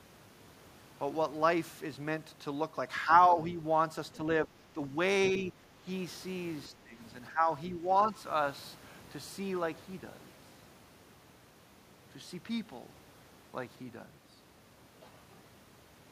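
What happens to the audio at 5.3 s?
From 5.27 to 5.39 s, a brief scrap of the other side's voice leaks through, sitting roughly 20 dB below the main speech. The talker's device is likely playing the far end on a loudspeaker, and the echo canceller left part of it in the microphone signal. Unlike room reverberation or the talker's own echo, this is not a delayed copy of the main speech but a separate, second voice bleeding in for about 0.12 s.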